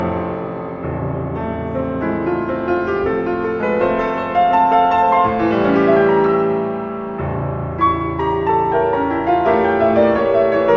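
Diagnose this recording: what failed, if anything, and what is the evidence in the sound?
Nothing stood out on listening that would point to a failure at any stage of the chain.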